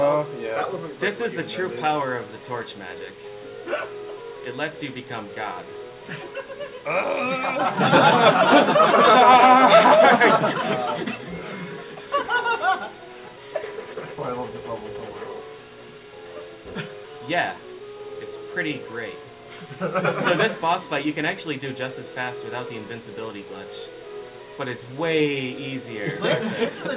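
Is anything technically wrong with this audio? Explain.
No, nothing is technically wrong with this audio.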